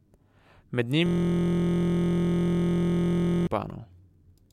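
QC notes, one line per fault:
1.06–3.47 s, system hang loop: the driver or host stalled while the audio hardware kept replaying one 23.22 ms ring-buffer segment, which fits a 1024-sample buffer. The same slice repeats about a hundred times, fusing into a steady 43.1 Hz buzz in place of the speech.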